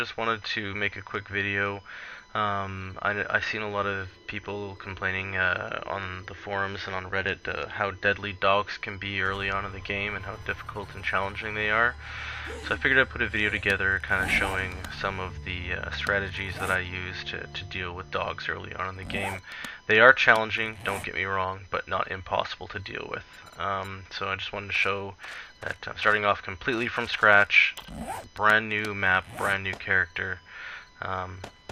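No technical faults can be heard anywhere in this recording.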